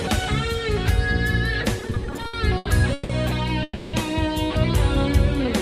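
From 1.79 to 3.11 s the audio falls into repeated stalls (stutter): fourteen short gaps, the longest 160 ms, where the receiver kept playing the last sound while packets arrived late. Together these fills take 420 ms, nearly a third of the span, so the audio drags and judders. Nothing is lost.

At 3.63 s comes a call audio freeze lasting to 3.95 s: one sustained 300 ms hold of the last sound, fading into about 10 ms of silence before the audio resumes where it stopped. It is a single long hold rather than many brief repeats, likely from packets held up in transit and an emptied jitter buffer.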